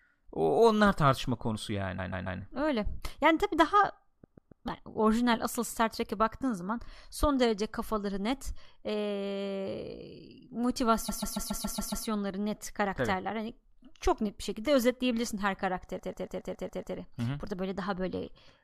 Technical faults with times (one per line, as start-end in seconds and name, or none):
1.98-2.39 repeated frames
4.23-4.65 repeated frames
11.08-12.05 repeated frames
15.98-16.95 repeated frames